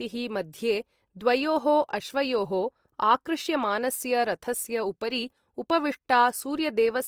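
Throughout the speech, low-bitrate artefacts persist and nothing sounds above 20.2 kHz. This is likely low-bitrate audio saved at a high bitrate, consistent with Opus re-encoded as 320 kbit/s MP3.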